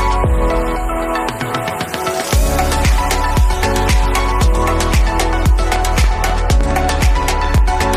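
From 5.76 s to 7.59 s a train of clicks runs over the sound, about ten sharp pulses at roughly six per second, spaced unevenly and peaking about 10 dB above the signal. They share one shape and tick through pauses too, unlike random crackle, likely from external interference.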